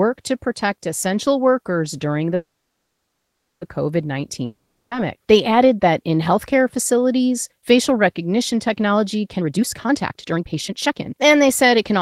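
A call audio freeze runs from 2.35 to 3.63 s in this speech recording, just after "protect essential workers during". The likely cause is delayed packets leaving the jitter buffer empty: the last sound is stretched into a fading buzz, followed by about 1.15 s of silence. The speech then resumes exactly where it stopped, so nothing is lost, but everything after it arrives 1.26 s later. A long network dropout from 4.45 to 4.93 s removes 460 ms of speech outright. The last sound fades over most of the gap, with only about 10 ms of silence, and the speech returns further on without the missing stretch, which points to packets likely lost in transit. A jitter buffer speed-up begins at 9.37 s, after "facilities facial recognition technology", and continues to the end. To drain excess buffered audio, short pitch-period slices are repeatedly cut out, roughly a second in total. The speech runs at 140% speed with unchanged pitch and sounds noticeably hurried.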